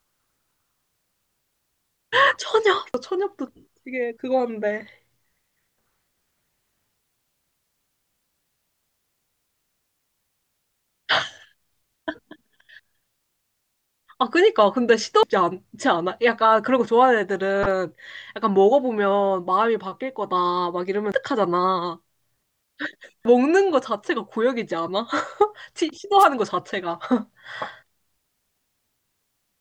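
Damaged data in the compressed stream hits five times, at 2.94 s, 15.23 s, 17.63 to 17.71 s, 21.12 s and 23.25 s. Some of the coded bytes were corrupted, so the decoder misread those frames, lost its place and had to hunt for the next valid frame header. Each instance comes through as a sudden chirp or blip cutting into the speech. The one at 17.63 s lasts about 80 ms and sounds longer than the brief single hits.

At 26.18 to 26.26 s there is a wireless microphone noise hit. The analogue FM radio link faded as reflected signals cancelled at the receiver, and the receiver's own noise rose up through the demodulated audio. For about 80 ms this produces a short swish of static over the speech.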